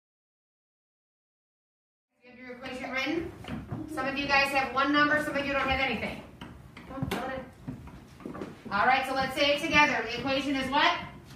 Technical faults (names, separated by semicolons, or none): none